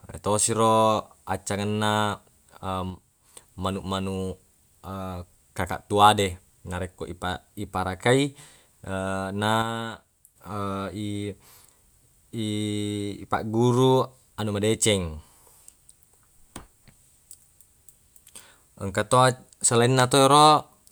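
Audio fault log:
2.90–3.34 s and 9.62–10.36 s: sudden gain jump. The speech and the background noise beneath it drop together in one step, by about 5 dB in the first span and about 6 dB in the second, then snap back at the end of each span, with no fade in or out. The likely cause is a digital gain change applied between one sample and the next without a ramp, so the whole signal shifts level at once.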